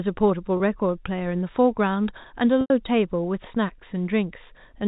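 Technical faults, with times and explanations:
0.57–0.60 s: packet loss with pitch repetition. About 30 ms is missing, which fits one lost packet. The last pitch period is repeated across the gap, giving a brief held, buzzy tone.
2.61–2.70 s: packet loss with pitch repetition. A 90 ms gap points to three lost packets. The repeated pitch period fades toward silence, then the speech returns through a short cross-fade.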